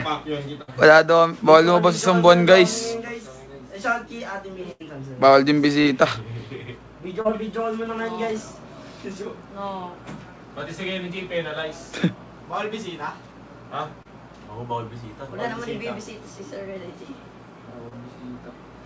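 Audio carried over a call link, band-limited to nothing above 8 kHz, which fits a wideband codec such as G.722, has two bursts of packet loss. The first runs from 0.62 to 0.70 s and the second from 4.72 to 4.82 s, with about 60 ms and 80 ms of the signal gone respectively. In each gap the receiver extends the last sound and fades it down, giving a held buzz or decaying hiss, before playback picks up further along with the intervening material missing. Four shorter concealed packet losses follow, at 5.82–5.87 s, 7.21–7.27 s, 14.03–14.07 s and 17.89–17.93 s, each dropping about 20 ms except the second, which loses about 40 ms. Here the decoder bridges the hole by continuing the preceding pitch or noise shape and cross-fading back into the real signal, heard as a brief smear or wobble, and a short transient sound falling in a gap can disappear.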